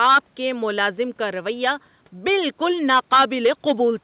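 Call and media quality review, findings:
Nothing to flag here: the speech came over a call path with nothing above 4 kHz, which fits narrowband G.711 mu-law at 64 kbps, and no faults turned up.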